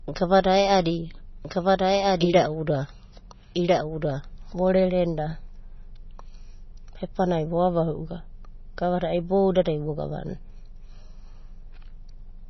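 From the start the speech sounds watery and swirly, with nothing above 5.9 kHz, the heavy damage of MP3 compression. The encoder likely ran short of bits, which fits a low bitrate around 24 kbps, so it chopped the treble and kept flicking weak detail on and off.

From 1.45 s to 5.49 s there's a doubled audio track. A second full-band copy of the speech, about as loud as the original, trails it by roughly a second and a half, likely from a slower capture path. It cuts in and out abruptly with no room tail.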